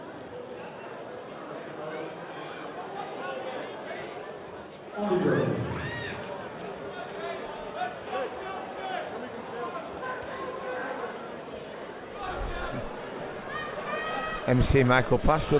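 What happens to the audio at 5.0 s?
At 5.0 to 5.04 s there's a short concealed packet loss: about 20 ms never arrived, so the decoder patched the gap by extending the previous sound, leaving a quick smear or wobble.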